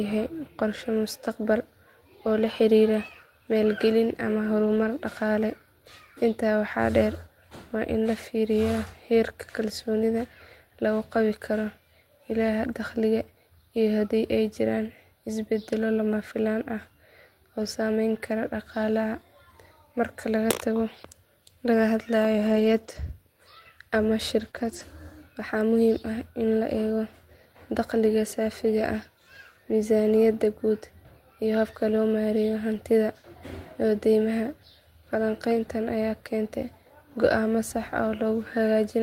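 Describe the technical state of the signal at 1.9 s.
Nothing is wrong with the signal at 1.9 s; the speech there comes through intact, with no audible fault.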